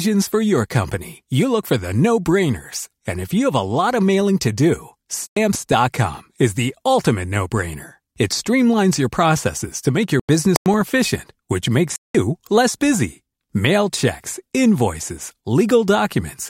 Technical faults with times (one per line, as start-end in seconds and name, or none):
4.21 corrupt FLAC frame
5.27-5.73 corrupt frame muted
10.20-10.81 corrupt frame muted
11.96-12.15 corrupt frame muted